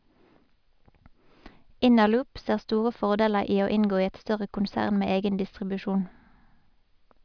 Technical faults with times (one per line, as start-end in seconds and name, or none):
none